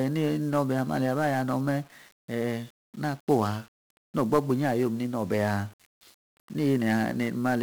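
From start to finish, the speech carries heavy 1-bit DFPWM compression damage. Each sample keeps only one bit, nudging a running level up or down. The coarse tracking leaves loud broadband noise. Everything sounds fuzzy and crackly, treble drowned in hiss. The density fits a 48 kbps stream.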